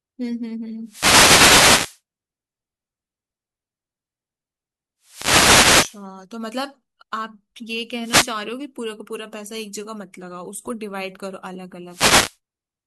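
Speech, and it's got four wireless microphone noise hits, short swishes of static at 0.84 to 2.01 s, 5.01 to 6.06 s, 8.01 to 8.35 s and 11.88 to 12.37 s. Each is the FM radio link fading as reflections cancel, letting receiver noise surge up over the voice.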